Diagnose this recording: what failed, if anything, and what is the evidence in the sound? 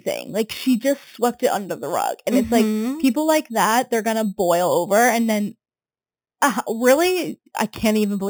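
The rate conversion stage failed: there's imaging from sample-and-hold upsampling across the whole speech clip. A bright metallic fizz sits about 16 dB under the signal, filling 4 to 8 kHz, which points to 8 kHz audio upsampled to 48 kHz by repeating samples with no smoothing filter.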